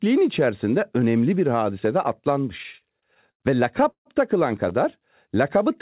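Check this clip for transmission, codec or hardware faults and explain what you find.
There are two delivery problems here, both timing stalls rather than lost audio, over a telephone-band path with nothing above 4 kHz, which fits G.711.

Repeated stalls (stutter), 2.58 to 3.42 s, starting right after "önemli bir hadise de": packets kept arriving late, so the jitter buffer ran dry nine times and the receiver stretched the last sound to cover each gap. About a quarter of that stretch is filler, with the longest hold at 87 ms, so the speech drags and hiccups without losing anything.

Call audio freeze, 3.90 to 4.07 s: the sound hangs for about 150 ms, tailing off into roughly 110 ms of silence before picking up again where it left off. That's likely packets held up in transit emptying the buffer, which inserts a pause without dropping anything.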